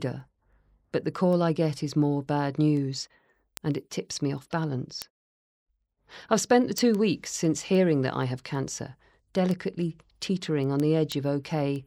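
Word clock ticks run from 0.20 s to 11.76 s, around seventy sharp clicks roughly every 0.15 s beneath the speech. The receiver isn't locked to the sender's clock and drifts by roughly 150 ppm, so each slip drops or repeats one sample.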